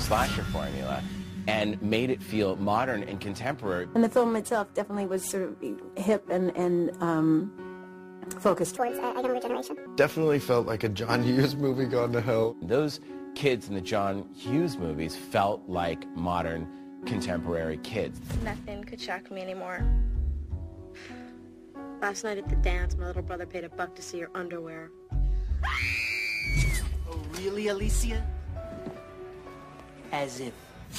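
From 8.77 s to 9.86 s a section plays at the wrong speed, running 1.5 times too fast, so pitch rises about seven semitones along with tempo. The sound turns high and hurried, then drops back abruptly. Likely cause: playback fitted to a mismatched clock.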